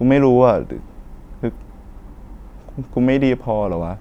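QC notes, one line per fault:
No fault heard in the speech.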